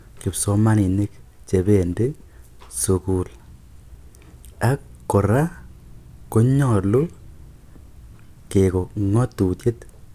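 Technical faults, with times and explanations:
Nothing stood out on listening to this speech recording.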